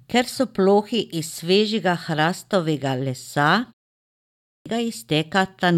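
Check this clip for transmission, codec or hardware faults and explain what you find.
One hardware-side fault shows up here, a clipped start after a pause, near the end of the speech. At 4.21 s, after a pause of about 0.56 s, the sound comes back abruptly with roughly 0.45 s missing, so the first part of what's said is simply gone and the speech jumps in mid-stream. The output device seems to have dropped into a low-power state during that short silence and needed close to half a second to wake up again. The ordinary muting of the background in pauses isn't the issue.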